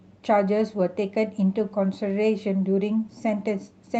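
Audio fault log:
Nothing to log on this speech recording, as there's no fault to be heard anywhere in it.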